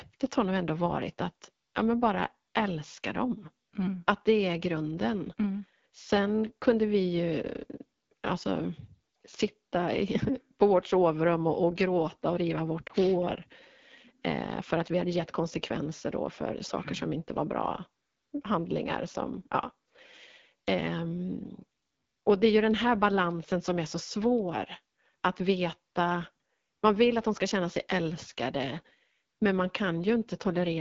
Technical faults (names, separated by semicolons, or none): AMR wideband (HD Voice) codec; lost AMR speech frames